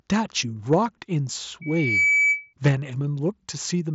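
At 0.72 to 0.74 s the input gain was likely set too high, driving peaks about 2 dB past the converter's ceiling. This is microphone overload. A small share of the waveform has its tops flattened, so a brief harsh crackle rides on that loud moment of speech instead of a clean peak.

From 1.61 to 2.54 s the microphone picks up the loudspeaker it is feeding, and the loop gain climbs above unity at 2.3 kHz. This is a loudspeaker feedback squeal. The tone builds over roughly 0.4 s and then holds as a piercing whistle sitting around 5 dB above the speech.

At 2.65 to 2.68 s a second microphone overload hits harder, about 5 dB over the limit, with around a fifth of the samples clipped. The distortion is a coarser, more obvious crunch than the first.

Right after it, at 2.68 s, the call software likely reacts to that clipped peak by cutting the input volume in a single step of 3 dB. This is a microphone volume step-down. 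Speech and background together drop abruptly in level at that instant, a small step downward. Through all of this the Bluetooth mSBC headset link stays wideband, with nothing above roughly 7.7 kHz.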